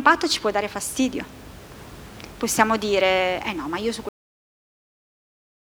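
At 4.09 s the final buffers were never written or played, so the speech has a cut-off end. It stops partway through a sound and falls straight to digital silence with no decay, taking the room noise, about 19 dB below the speech, with it.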